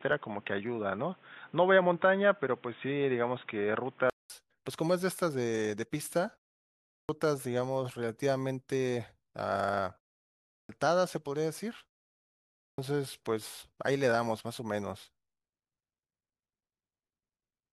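From 0 to 4.3 s the sound is narrow and boxy, with nothing above 3.8 kHz, a faint background noise well below it, and a 200 ms silence before full bandwidth returns. This is likely an input switched to a poorer device. A spectrogram shows a flat ceiling, then a gap. At 6.83, 10.42 and 12.51 s, the clipped start after a pause swallows about 0.26 to 0.27 s of sound, so onsets begin abruptly. The waveform jumps straight from flat silence into speech.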